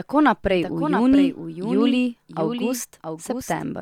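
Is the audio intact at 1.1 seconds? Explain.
No. At 1.1 s, as throughout the clip, there is a doubled audio track: a second full-band copy of the speech trails the original by roughly 0.7 s, about 5 dB quieter. It is likely a second capture through a slower path, or an edit holding two copies out of step. The copy carries no decay or room colour, so it sounds like a distinct, slightly softer repeat laid over the live speech.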